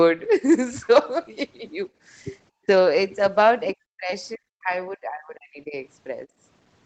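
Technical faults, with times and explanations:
2.5–2.66 s and 6.26–6.38 s, background gated by the echo canceller: the canceller clamped the microphone while the loudspeaker played, so room sound briefly drops by about 28 dB, then about 15 dB.
3.97–4.11 s, 4.35–4.72 s and 4.89–5.75 s, speech suppressed in double talk: overlapping talk likely left the echo canceller unable to separate talker from echo, so speech cuts out in pieces, dropping about 30 to 40 dB.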